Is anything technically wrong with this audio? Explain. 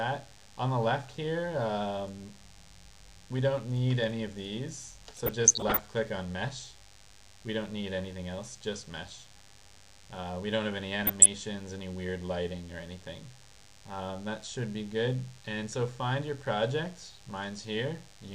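Yes. A DECT cordless phone buzz runs throughout. A nearby handset or base transmits bursts every 10 ms that the circuitry rectifies, giving a thin 100 Hz buzz roughly 25 dB under the programme. On a spectrogram it appears as steady horizontal lines at 100 Hz and its many harmonics.

DAB burbling occurs from 5.17 to 5.79 s and from 11.03 to 11.28 s. Weak reception lets bit errors corrupt the MP2 data, so wrong samples put short blips of noise into individual sub-bands, producing burbling. A spectrogram shows scattered, blocky patches in isolated bands.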